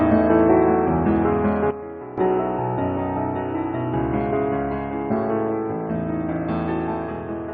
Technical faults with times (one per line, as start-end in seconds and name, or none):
1.71-2.18 sudden gain jump